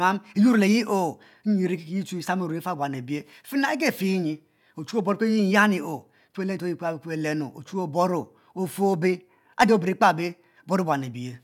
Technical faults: none

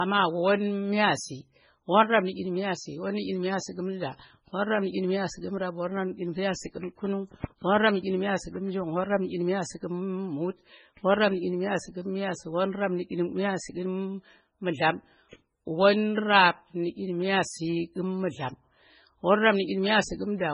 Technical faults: MP3 compression

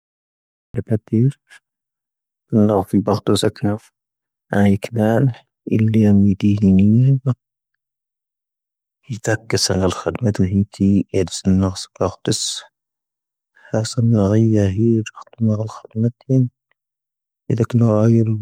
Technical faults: cut-off start

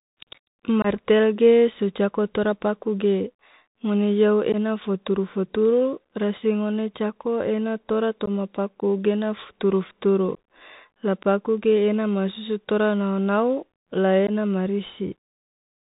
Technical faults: Bluetooth CVSD headset codec; unconcealed Bluetooth headset packet loss

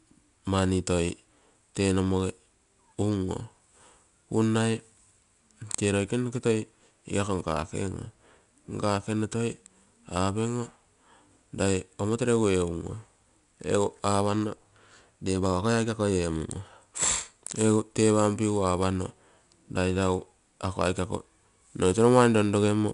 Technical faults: 4-bit ADPCM compression

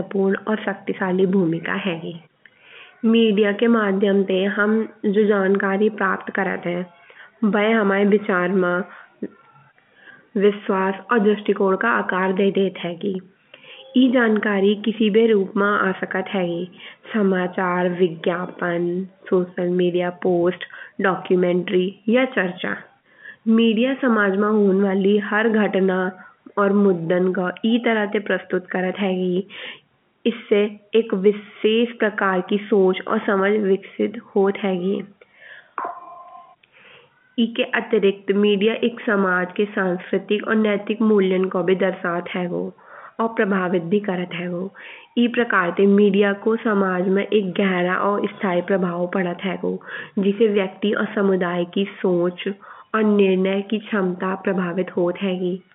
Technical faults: none

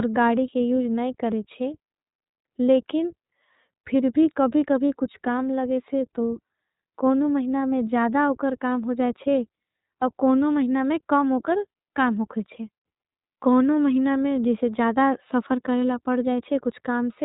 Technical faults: iLBC codec

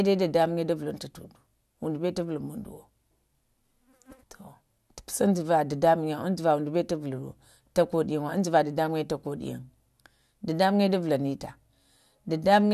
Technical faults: none

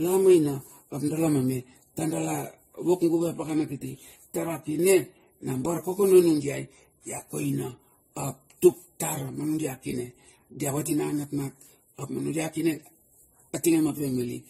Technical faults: transcoding between lossy codecs

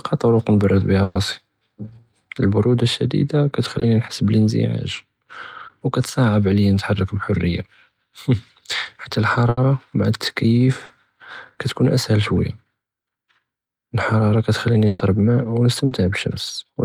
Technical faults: burst of packet loss; short concealed packet loss

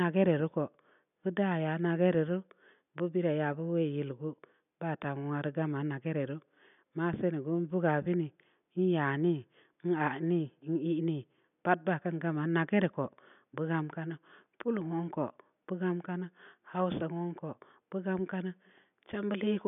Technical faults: none

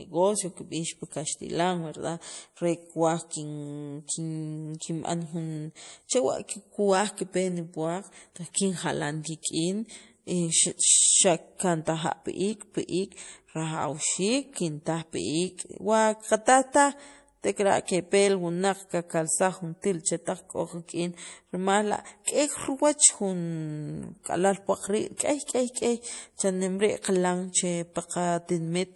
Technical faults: low-bitrate audio saved at a high bitrate

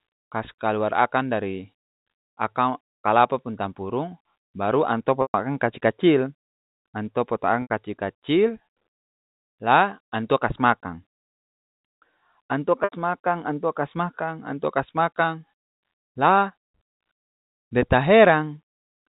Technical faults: packet loss with pitch repetition

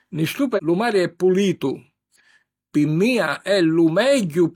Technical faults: damaged data in a compressed stream

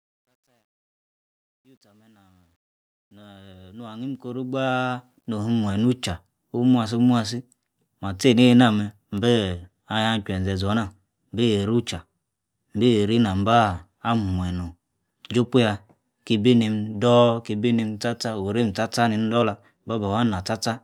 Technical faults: truncation distortion on a fade

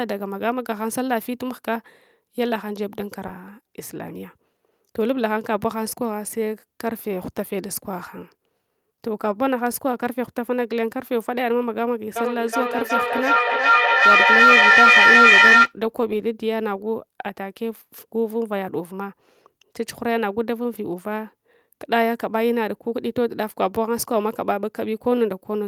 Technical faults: skip ahead; jitter buffer speed-up; feedback echo between two devices

